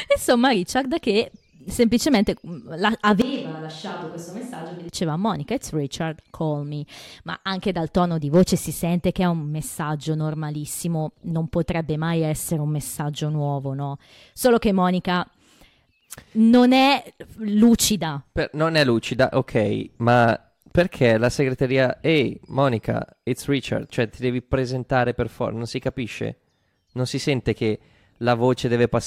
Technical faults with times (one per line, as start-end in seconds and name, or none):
3.22-4.89 switch to a distant microphone